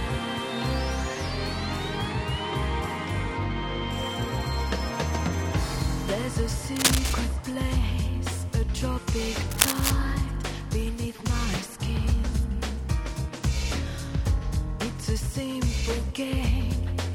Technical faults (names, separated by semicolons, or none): cable scratch noise